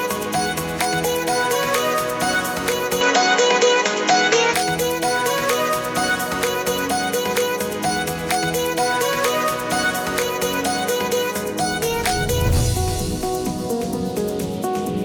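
From 3.01 to 4.54 s the audio turns duller and shifts in level by roughly 5 dB, likely an input switched to a poorer device. A spectrogram shows nothing above 7.5 kHz there, and the waveform steps in level.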